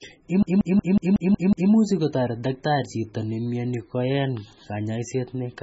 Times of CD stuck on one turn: 0.43-1.71

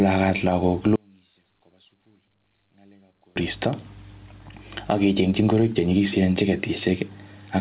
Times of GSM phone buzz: none

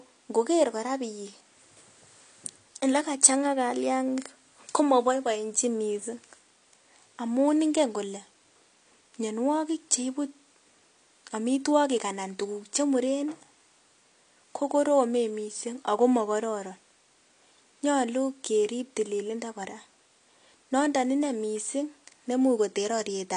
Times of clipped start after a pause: none

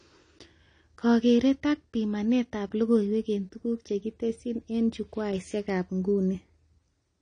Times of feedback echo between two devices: none

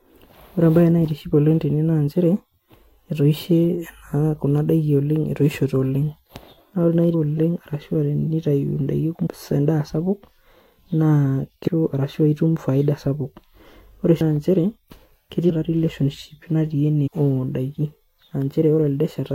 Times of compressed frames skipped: 9.25-9.28, 11.66-11.68, 14.20, 15.49, 17.06-17.08

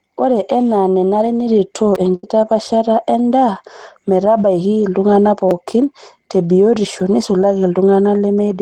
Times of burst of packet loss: 2.15-2.26

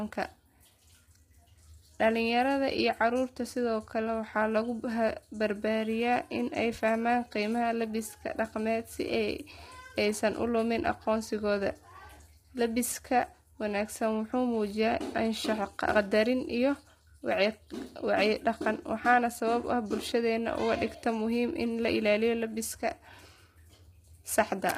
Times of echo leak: none

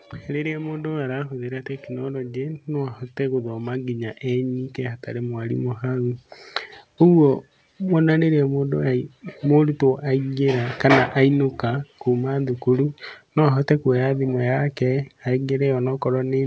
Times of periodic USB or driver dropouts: none

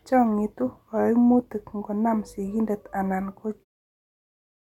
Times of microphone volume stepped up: none

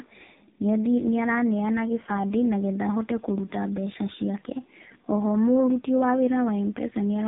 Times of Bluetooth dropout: none

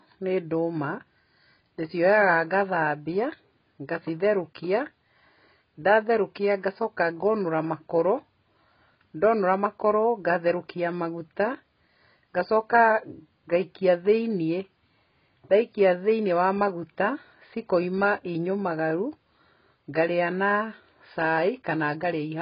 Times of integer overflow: none

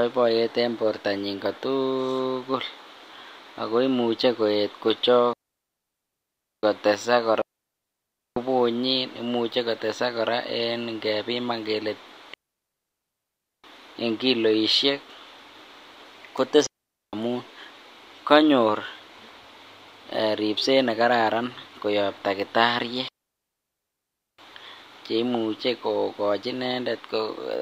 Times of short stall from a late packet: none

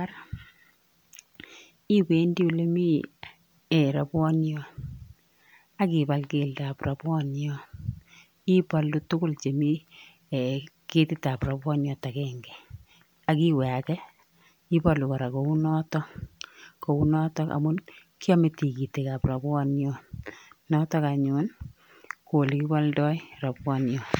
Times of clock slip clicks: none

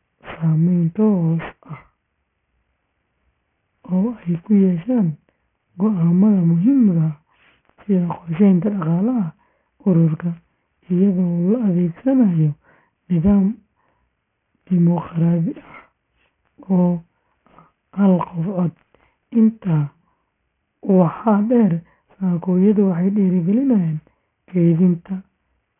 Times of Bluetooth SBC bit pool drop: none

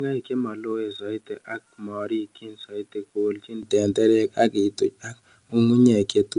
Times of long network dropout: none

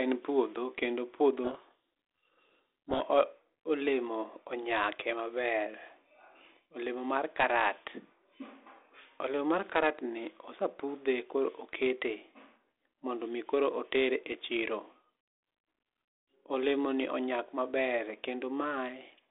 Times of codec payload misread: 1.44-3.01

